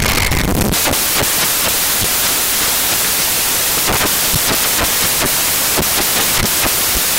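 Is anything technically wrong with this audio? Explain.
Yes. Throughout the speech clip, the samples are built from the wrong bytes: misordered or misaligned bytes turn fast-changing low bits into the dominant part, giving loud, harsh broadband noise, close to white on loud sounds.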